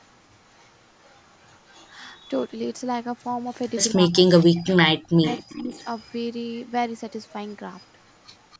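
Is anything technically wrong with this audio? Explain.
Yes. A faint delayed copy of the speech trails it from 0 to 2.44 s, 3.69 to 4.62 s and 5.32 to 8.58 s, lagging about 275 ms and sitting roughly 30 to 35 dB down. This is likely echo leak: a far-end loudspeaker's sound reaching its microphone and slipping past the echo canceller.

Between 3.93 and 5.69 s the speech repeatedly dips, at worst by around 40 dB, for about a second in total. This is likely speech suppressed in double talk, with the echo canceller unable to separate overlapping talkers and attenuating both.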